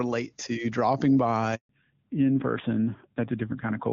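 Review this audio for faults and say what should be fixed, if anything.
At 1.55 s the speech drops out abruptly, fading within a few tens of milliseconds into silence that lasts until 1.69 s, a 140 ms hole. This is a handover gap: the call was switched from one network link to another, and for those 140 ms no speech frames reached the receiver. Nothing was sent to fill the gap, so whatever was said in that stretch is gone. Making the handover seamless, with the new link established before the old one is released, would prevent it.

From 1.69 s to the end the voice sounds duller and rougher, with all content above 4 kHz missing. This is a fallback to narrowband. Before the switch the call was carried in HD Voice on AMR wideband, which sounds clean, at what fits its top 23.85 kbit/s mode. Afterwards the cut at 4 kHz and the added coarseness point to narrowband AMR at around 7.4 kbit/s. Ensuring the new network supports and negotiates AMR-WB would keep the call in wideband after handover.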